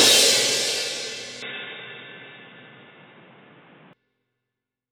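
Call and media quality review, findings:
1.42–3.93 s: audio turns dull, nothing above 3.8 kHz, level shifts about 5 dB, faint new noise floor. Likely input switched to a poorer device, no gap at switch.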